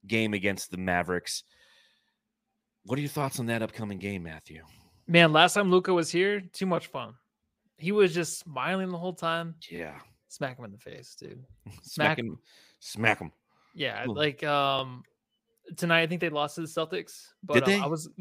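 At 4.74 s the speech gives a small stutter, and again at 14.79 s. These are overlapping chunks. The audio was handled in pieces about 5 s long. Each piece began before the last had ended. So about 25 ms plays twice at each join, heard as a brief click.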